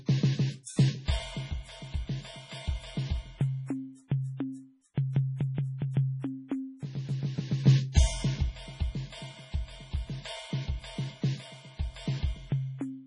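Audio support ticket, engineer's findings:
Music watery and swirly throughout, treble gone above 10.6 kHz. Spectrogram shows a flat ceiling and flickering holes in weak bins. Likely MP3 compression starved of bits, fits about 24 kbps.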